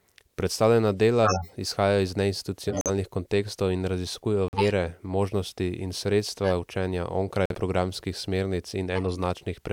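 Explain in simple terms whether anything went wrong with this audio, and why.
Two kinds of damage are audible in this speech, both from bits getting scrambled inside the compressed audio data.

Corrupt frame decoded: at 1.24 to 1.54 s, 6.44 to 6.49 s and 8.95 to 9.23 s the player accepted damaged chunks of data and played them anyway. The garbled numbers put sound energy where it doesn't belong, so these moments come out as squeaky, noisy bursts. The first and last run across several consecutive chunks, and the middle one is a single brief blip.

Corrupt frame muted: at 2.68 to 2.90 s, 4.48 to 4.71 s and 7.46 to 7.55 s the decoder rejected the damaged chunks, and the player filled the gaps with silence. Each gap cuts in suddenly. The first two are longer, about a fifth of a second, and the third is shorter, which fits fewer rejected chunks there. Timing stays intact, so the speech picks up where it should after each dropout.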